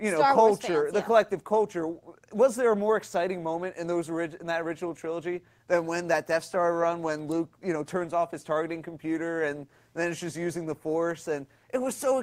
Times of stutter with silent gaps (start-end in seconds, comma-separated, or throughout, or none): none